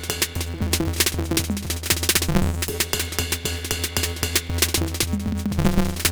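A block size mismatch (truncated) runs through the whole of this music clip: one stage hands over longer blocks than the next stage takes in, so the tail of every block is discarded. The repeated cut lays a steady buzz at about 172 Hz over the music, which fits a 256-sample read at 44.1 kHz. Because material goes missing, the music races along about 1.88 times too fast while keeping roughly its normal pitch.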